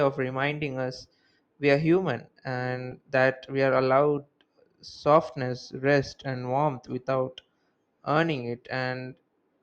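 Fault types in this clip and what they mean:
Compressed frames skipped: roughly one 20 ms coded frame is dropped at 2.91 s and 6.11 s, leaving a small waveform jump and a brief vertical spectrogram streak.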